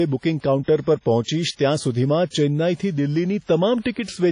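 WMA compression throughout, likely from an encode near 32 kbps: long transform blocks smear quantisation noise into washy ringing speech, with nothing above 10.1 kHz.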